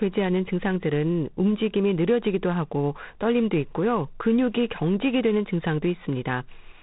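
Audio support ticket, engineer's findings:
G.726 ADPCM damage throughout the speech. Harsh, rasping hiss riding on the speech, rising and falling with its level. No content above 3.9 kHz. Coarse adaptive-difference coding, too few bits per sample. Grain level fits the 24 kbit/s mode.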